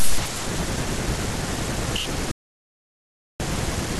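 At 2.31 s the speech stops abruptly and the clip falls into complete silence until 3.40 s. This is an audio dropout to silence, lasting about 1.09 s. There is no room tone or hiss in the gap. The likely cause is the input being lost for that stretch, while recording carried on writing empty samples. The speech then resumes mid-flow, and whatever was said during the gap is gone.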